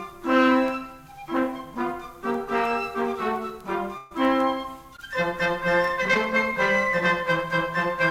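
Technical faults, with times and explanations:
3.97–4.13 s, burst of packet loss: about 120 ms of music was lost, and the receiver extended the preceding sound for about 130 ms while fading it before playback resumed further on.
4.97–5.00 s and 6.14–6.17 s, short concealed packet loss: roughly 20 ms went missing each time, and the brief bridging fill sounds like a small smear or wobble in the music.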